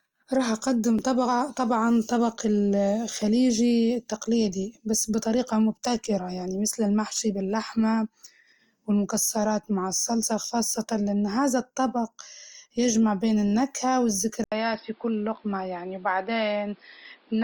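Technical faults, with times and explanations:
0.99 s, dropped samples: a single sharp click, a thin vertical line across the spectrum. The likely cause is under a millisecond of samples missing, so the waveform jumps ahead. Unlike a dropout, no audible sound goes missing and no gap is heard.
14.44 to 17.43 s, input switched to a poorer device: after an 80 ms silence, the sound turns dull, with a narrower band, level down about 5 dB, and a new noise floor about 35 dB below the signal. This is likely a change of input device. The gap and new noise set it apart from a filter or EQ change.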